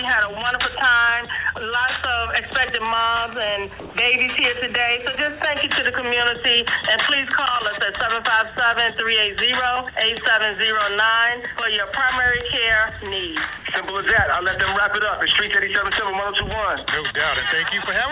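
Between 3.80 and 3.95 s, for about 150 ms, the background goes flat and uniform, losing its texture, and shifts in level by about 2 dB before the sound resumes. That is comfort noise in place of the background, likely from discontinuous transmission: with the background sitting about 21 dB below the loud passages, the sender's voice detector treated this stretch as silence and stopped sending, and the receiver filled the gap with synthetic noise of a similar spectral shape. Throughout the audio, nothing reaches above 4 kHz, which points to a narrowband call codec such as G.711.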